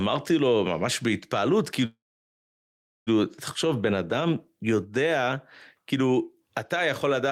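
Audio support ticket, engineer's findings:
Call audio freeze, 1.85 to 3.09 s. Last sound stretched into a brief fading fill, then about 1.1 s of silence; speech resumes exactly where it stopped. Likely jitter buffer underrun from delayed packets. Unlike packet loss, nothing skipped: gap inserted, latency up 1.2 s.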